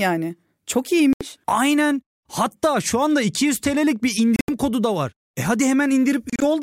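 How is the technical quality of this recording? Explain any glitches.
The speech is interrupted by three brief holes, each consistent with a Bluetooth dropout. The first, at 1.13 to 1.26 s, is a single gap of about 76 ms. The second, at 4.36 to 4.49 s, loses 107 ms spread over 122 ms, with a longest silent run of 76 ms. The third, at 6.30 to 6.44 s, loses 76 ms across 122 ms in shorter pieces, the longest 30 ms. The likely cause is wireless audio packets arriving too late and being discarded. Output drops to silence, and the speech picks up further along rather than where it stopped.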